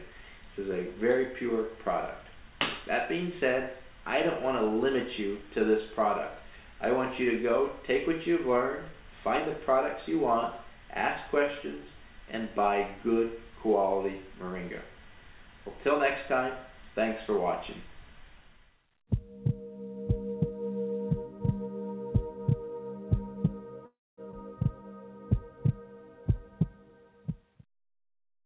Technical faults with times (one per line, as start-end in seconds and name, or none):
23.86-24.19 call audio freeze
24.31-24.34 skip ahead
26.90-28.40 jitter buffer speed-up